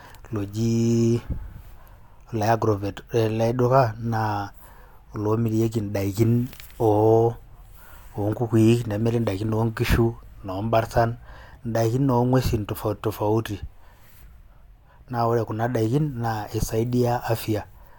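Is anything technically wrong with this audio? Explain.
No, the speech recording shows no technical faults.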